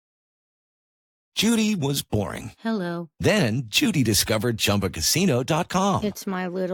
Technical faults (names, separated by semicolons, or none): none